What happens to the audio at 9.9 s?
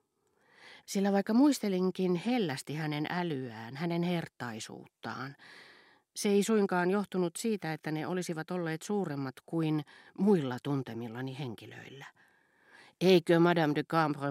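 Nothing goes wrong at 9.9 s; the speech carries on intact through that moment, with no dropout, click, glitch or other fault to be heard there.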